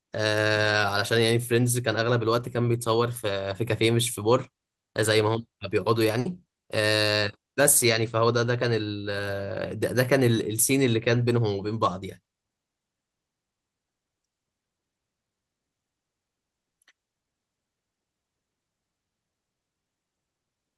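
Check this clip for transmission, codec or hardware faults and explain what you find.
Two transmission faults are audible, both packet losses in the network path.

At 6.19 to 6.27 s, a burst of packet loss: about 60 ms of consecutive audio never arrived, so the receiver stretched the last sound and faded it down before speech resumes with that stretch missing.

At 12.23 to 12.27 s, a short concealed packet loss: roughly 20 ms arrived too late, and the decoder's synthesized fill blends back in, leaving a brief smear in the speech.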